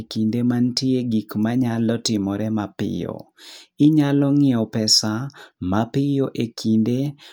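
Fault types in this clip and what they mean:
Nothing here needs a name or an explanation, since no faults turn up anywhere in the speech.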